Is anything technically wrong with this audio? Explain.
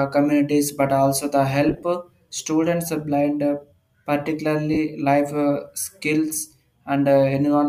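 Yes. The speech breaks into short, hissy smears at two points, a sign of lost LE Audio frames. From 1.69 to 1.83 s, about 80 ms of sound goes missing, scattered over 140 ms in gaps of around 30 ms at most. At 4.74 to 4.78 s, 30 ms of sound goes missing. That fits whole 10 ms frames dropping out. The decoder fills each gap by replaying the last spectrum with scrambled phase, so the speech turns grainy and noisy rather than falling silent.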